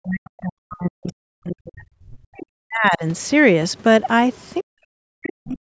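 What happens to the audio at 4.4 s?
From 4.34 to 4.45 s, a faint scrap of the other side's voice leaks through, very far below the speech. Likely the echo canceller left residue of the loudspeaker playback in the microphone. On a spectrogram it shows as weak, broken harmonic traces; the waveform barely changes.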